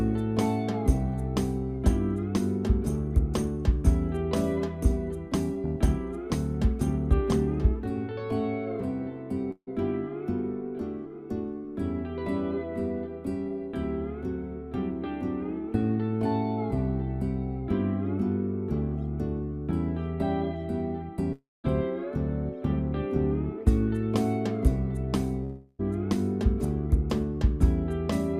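Three times the sound smears into a fading buzz, at 9.51 to 9.69 s, 21.33 to 21.66 s and 25.44 to 25.81 s, with silence in the first two before it resumes missing up to about 0.36 s, likely a long network dropout.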